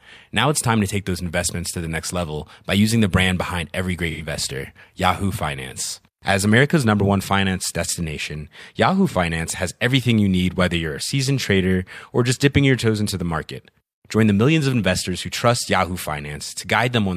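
Speech with AAC frame loss with concealment at 4.10 to 4.22 s, after "brand behind every", and 9.09 to 9.15 s, before "has everything you need". The decoder fills gaps of about 85 and 43 ms, fitting two lost frames and one, by reusing the last good spectrum, giving brief smeared, noisy patches.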